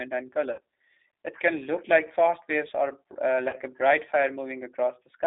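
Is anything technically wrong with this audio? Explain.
Yes. Throughout, the speech has passed through the G.729 codec at 8 kbit/s. It is rebuilt from a filter and sparse pulses within a 300 Hz to 3.7 kHz band, so it sounds plainly rough, thin and synthetic.

VoIP packet loss, concealed by the speech codec, occurs at 0.52 to 0.60 s and at 3.49 to 3.57 s, between "fast waves or uh" and "a bright". The decoder extrapolated about 60 ms and then 40 ms of missing audio, which produced a fading buzzy or noisy smear.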